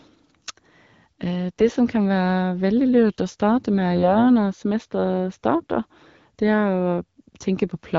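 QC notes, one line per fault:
1.58–1.69 s and 3.95–4.18 s, AMR bit errors: just before "som kan" and again in the later stretch, speech turns hoarse and gargly while pitch and level hold. Roughly one in twenty of the less-protected bits arrived flipped, scattering excitation pulses and corrupting pitch, gain and spectral detail across 4 and then 12 frames, against the lightly coded wideband AMR-WB background.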